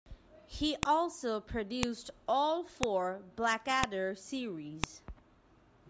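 Sharp snaps at 0.83, 1.83, 2.83, 3.84 and 4.84 s, once per second, are a file header played as audio: the speech was joined from 1-second WAV pieces with their headers left in. Each shows as a thin waveform spike and a vertical broadband spectrogram line.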